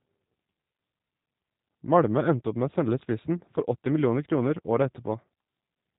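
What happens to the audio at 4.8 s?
G.729 codec coding is present at 4.8 s, as it is across the whole clip. The speech is rebuilt from a vocal tract filter, a pitch predictor and a handful of pulses per 10 ms frame rather than carried as a waveform, which fits an 8 kbit/s G.729A stream. The damage is plainly audible: the speech sounds rough and slightly synthetic, and nothing above 3.8 kHz survives, leaving it dull and boxed in.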